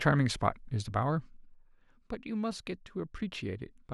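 From 0.85 to 1.62 s, zipper noise: the speech level drops about 10 dB in 1 dB steps, roughly ten per second, each unsmoothed jump ticking audibly, unlike a smooth fade.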